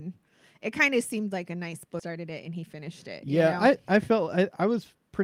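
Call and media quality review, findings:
Skip ahead, 1.99–2.01 s: abrupt forward jump with no gap; about a second of audio missing, two sides spliced almost directly. Jitter buffer overflow or transit loss with later audio already queued. Unlike a dropout, no silence or concealment fill, just the jump.

Jitter buffer speed-up, 2.09–4.45 s: delivery runs about 106% fast, slightly hurried, pitch unchanged; roughly 150 ms trimmed overall. Receiver repeatedly cut pitch-period-sized pieces to drain excess buffered delay. Unlike resampling drift, no pitch shift; unlike a skip, gradual rather than one jump.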